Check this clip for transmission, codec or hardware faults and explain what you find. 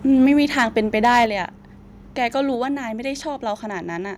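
Two faults recur in this speech clip: microphone overload and a stepped-down microphone volume. Microphone overload occurs from 0.12 to 0.32 s, 0.59 to 0.63 s and 1.03 to 1.25 s, with peaks pushed about 1, 4 and 5 dB past the converter's limit. The likely cause is input gain set so high that the converter flattens the loudest peaks, giving a harsh crackle that grows worse with each burst. Unlike a level drop, it adds distortion rather than changing loudness. The microphone volume is stepped down at 0.26 s by about 2 dB and at 1.26 s by about 5 dB. Each step comes during or just after a clipped stretch, which points to software likely reacting to the overload by trimming input gain. Voice and background fall together in one step.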